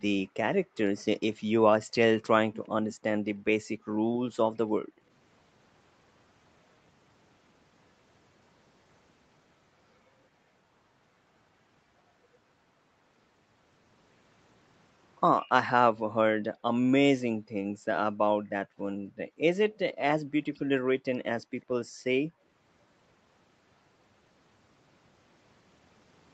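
From 0.63 to 0.75 s the room background is gated by the echo canceller, dipping by about 40 dB and then returning. Unlike a network dropout, the speech itself is kept and only the ambient bed vanishes.

Between 2.54 and 2.95 s a faint duplicate of the speech trails the original by 98 ms, roughly 20 dB quieter. This is likely an echo leak from a loudspeaker-side canceller. It is a distinct repeat rather than a smooth reverberant tail.

The same gating returns at 4.74–5.04 s (about 31 dB), 17.35–19.78 s (about 40 dB, with around one and a half seconds of suppression in total), 21.4–21.53 s (about 40 dB) and 21.85–22.42 s (about 32 dB). Each time the background ducks and recovers.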